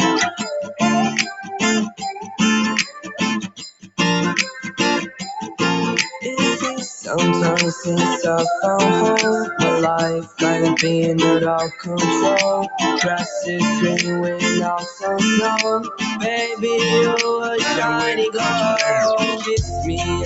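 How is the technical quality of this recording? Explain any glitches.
The recording is marred by a speech noise suppressor working on non-speech sound, which keeps dipping the level and cutting parts of the sound away. The call path above it carries audio only up to 8 kHz.

Noise suppressor applied to music or sounds, throughout: the suppressor mistakes sustained and ambient sound for noise and keeps pulling it down. The level swings by around 5 dB, so the audio pumps and thins as held sound and tails sink while attacks survive.

Sound cut by the noise suppressor, at 1.37–1.54 s, 1.9–2.4 s, 2.85–3.99 s, 10.22–10.41 s, 11.69–11.88 s, 14.79–15.04 s, 15.81–16.24 s and from 19.33 s to the end: here the suppressor treats the sound itself as noise. Drops range from about 7 dB to about 19 dB, deepest at 2.85–3.99 s, heard as the sound sinking or its decay being chopped short.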